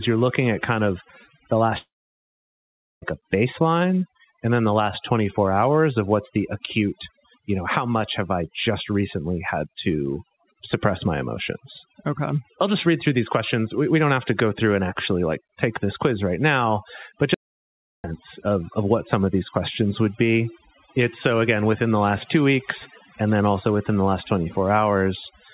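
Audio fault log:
Throughout, overdone noise removal: a noise reducer set far too aggressively pushes individual frequency bands down or out whenever they sit close to its noise estimate, so softer parts of the speech are stripped away with the hiss. Pauses collapse to near silence sprinkled with twinkling specks, all within the narrow band of the G.711 call path, which leaves nothing above 4 kHz.
1.78–3.04 s, long network dropout: audio stopped arriving for about 1.24 s, most likely from a network outage. The receiver tries to bridge the gap by stretching the last sound into a fading buzz or hiss. That concealment gives out quickly, and about 1.13 s of the gap is plain silence. Speech resumes at "a baseline and then" with the lost section simply absent after "at kind of the", so the phrase jumps forward.
17.34–18.04 s, audio dropout to silence: the input feeding the recorder was cut for about 0.7 s, likely from a momentary link failure or stray mute, while silence kept being written. 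The sound stops dead after "quiz right now but" and returns abruptly at "of of what some". The gap is silent with no room tone at all, and whatever was said in that interval is gone.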